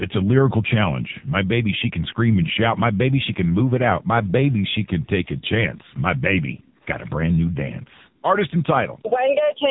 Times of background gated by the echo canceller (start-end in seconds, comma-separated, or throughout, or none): 0.40-2.54, 3.22-6.82